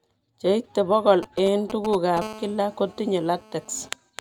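GSM signalling bursts appear from 1.23 to 2.19 s: a galloping dit-dit-dit of short 217 Hz buzzes sitting roughly 10 dB below the speech. The pattern points to a nearby 2G handset exchanging short control transmissions with the network. The audio circuitry rectifies those radio pulses into audible clicks, and each short group carries the 217 Hz burst rate that gives the buzzes their rasp.

GSM phone buzz follows almost immediately, from 2.22 to 3.89 s, as a hard, continuous buzz at 217 Hz with a dense stack of harmonics, about 20 dB below the speech. This fits the same handset now holding a call and transmitting steadily, 217 times a second. The rectified bursts become an unbroken grating tone that takes no account of what is being said and runs beneath it without a pause.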